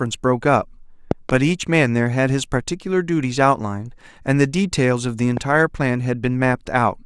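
At 1.11 to 1.32 s a loud pop cuts into the speech as a pair of sharp thumps, peaking about 15 dB above the surrounding level, while the talking continues underneath. A single, shorter pop follows at 5.37 to 5.39 s, about 10 dB above the signal. Both sound like a voltage step or spike, likely from a plug, switch, static discharge or driver glitch, added to the signal and shaped by the downstream circuitry.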